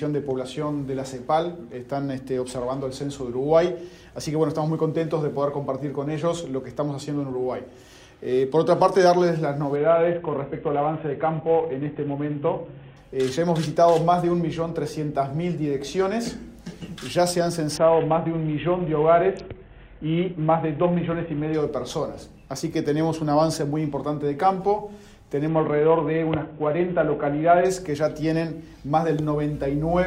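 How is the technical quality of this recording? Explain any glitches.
The recording suffers a Bluetooth SBC bit pool drop three times, at 9.76–12.97 s, 17.77–21.54 s and 25.48–27.65 s. Each time the link starved the encoder of bits, consistent with bit pool falling from 28 to 5 (around 54 kbps). Treble dulls and gritty noise appears; spectrograms show the top band vanishing, then returning.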